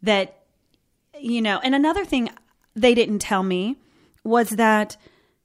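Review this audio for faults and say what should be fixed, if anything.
Nothing here needs fixing, since no faults turned up anywhere in this speech recording.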